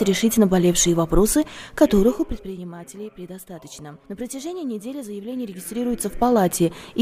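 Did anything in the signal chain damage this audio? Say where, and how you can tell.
Yes: zipper noise from 5.32 to 6.41 s, where a gain change of about 15 dB arrives as unsmoothed 2 dB steps, roughly ten a second, each ticking audibly as the level moves.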